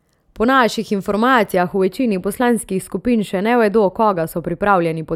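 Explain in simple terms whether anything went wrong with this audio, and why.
From about 1.56 s to the end, the speech takes on a thin, phasey, less crisp quality, as if some of its upper sparkle had been scooped out. This is channel delay (comb filtering). One side of the recording arrives a tiny fraction of a millisecond late, about a few samples. When both sides are mixed into one, parts of the sound cancel at regularly spaced pitches, the first near 7 kHz, which dulls the top end.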